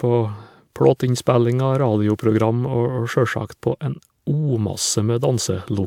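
No technical faults are audible anywhere here.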